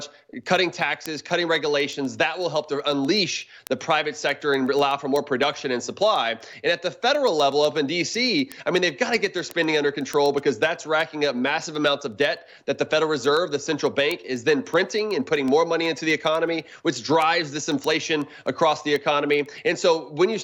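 From 0.19 s to 20.33 s, word clock ticks recur about every 0.15 s, roughly 150 in all. The receiving device is running on its own clock, off by around 150 ppm, so each clock slip drops or repeats a single sample and produces a short tick.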